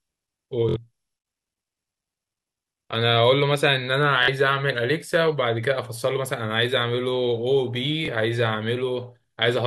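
Bluetooth stutter at 0.69–0.76, 4.23–4.28 and 8.06–8.08 s. The receiver repeats a short slice as a brief buzz while packets are missing, then speech resumes about 70, 46 and 23 ms further on.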